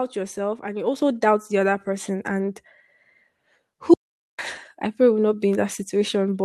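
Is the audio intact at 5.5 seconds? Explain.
Yes, at 5.5 seconds the speech plays through with no dropout, click, distortion or other fault.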